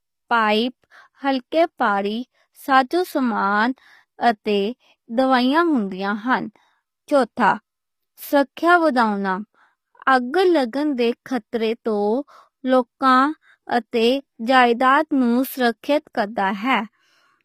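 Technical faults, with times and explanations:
Throughout, HE-AAC compression: the speech was likely encoded with HE-AAC v2 at a rate fitting about 24 kbps, so its treble is synthesised by copying lower bands upward. The mismatched harmonics make s sounds plainly gritty and lispy, and nothing exceeds 15.5 kHz.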